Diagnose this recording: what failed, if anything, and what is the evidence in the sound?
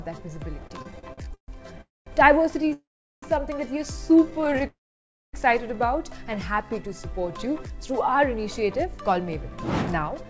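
Network and jitter-buffer stage, heard as repeated stalls (stutter). From 0.60 to 2.73 s the sound keeps catching and dragging, with the last sound held over for up to 140 ms, filling about a fifth of that stretch. It happens again more tightly between 4.31 and 4.65 s, with tiny fills of up to 13 ms that cover nearly a third of the span. Packets were arriving slower than playout, so the buffer kept draining and the receiver bridged each gap.

Call audio freeze, three times. The first is at 1.81 to 2.08 s with about 210 ms of dead air, the second at 2.73 to 3.24 s with about 400 ms, and the third at 4.67 to 5.35 s, roughly 590 ms silent. Each starts as a fading continuation, then the audio resumes where it stopped, so nothing is lost, only delayed. The likely cause is packets stuck in transit that emptied the buffer.

Jitter buffer slow-down from 6.56 to 7.47 s. The sound drawn out to about 92% speed at unchanged pitch, with roughly 77 ms stretched in. 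That's the receiver repeating single pitch periods to rebuild its reserve.

Jitter buffer speed-up from 8.43 to 10.25 s. Things run about 7% fast, still at the same pitch, with around 150 ms trimmed out in small pieces. The buffer had overfilled, so it shaved delay. Throughout, nothing above 8 kHz comes through, which fits the G.722 call codec on this path.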